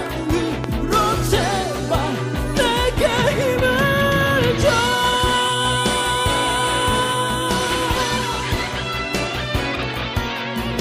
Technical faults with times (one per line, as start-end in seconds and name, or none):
0.64-0.66 loud pop
4.78-4.81 loud pop